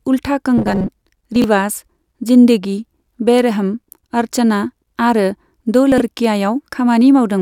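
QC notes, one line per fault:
0.58–0.90 s, robotic sound from repeated short buffers: For about a third of a second the speech turns into a rigid, metallic buzz pitched at 188 Hz while still loosely tracking the syllables. The likely cause is that audio arrived too seldom and the player kept re-looping the last short buffer, roughly half of the stretch being repeats. A fixed loop of about 5.3 ms imposes its own period as a constant pitch.
1.36–1.44 s and 5.92–6.00 s, chunks out of order: Two brief garbled moments, the second just after "बेरहम अर्चना आरो दो". In each, a 20 ms chunk plays three chunks after the position it belongs in, so the 80 ms span is reordered. No audio is missing, but the shuffled sequence breaks the continuity of the sound and creates three hard joins, which makes the passage sound jumbled.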